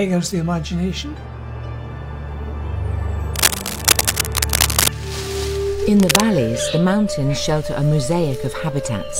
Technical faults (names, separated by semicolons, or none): cable scratch noise